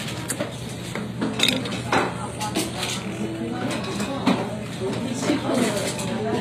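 Throughout, the treble is bright but gritty and metallic, with high detail that fails to match the body below it, which fits a low bitrate near 24 kbps and likely comes from HE-AAC compression. Its band replication copies lower bands upward, so a spectrogram shows repeated, coarsely shaped upper-band patterns and nothing above 15.5 kHz.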